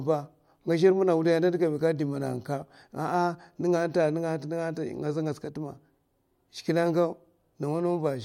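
No technical faults are audible anywhere in the speech.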